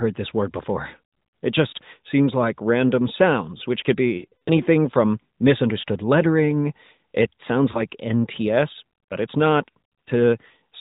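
From 4.18 to 4.51 s, lost AMR speech frames make the speech smear and sag in short gaps up to 60 ms, as the decoder stretches old settings. At 7.72 s, a single lost frame gives a brief dip.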